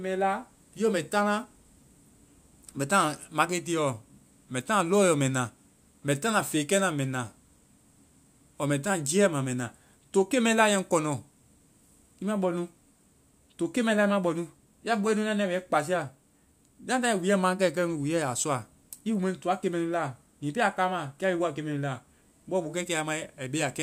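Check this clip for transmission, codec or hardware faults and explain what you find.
No transmission, codec or hardware faults are audible anywhere in the recording.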